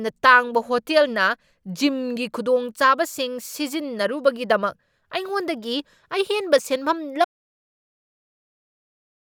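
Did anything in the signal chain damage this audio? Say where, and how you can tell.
Yes. The speech stops abruptly at 7.25 s and the audio stays silent through to the end of the clip, with no room tone or noise floor in the gap. That flat silent gap is the signature of an audio dropout to silence: the input path, most likely a disconnected device, a failed link or an accidental mute ahead of the recorder, stopped delivering samples while the recording or encoding stage kept writing silence.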